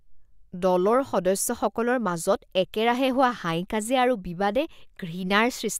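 No technical faults are audible.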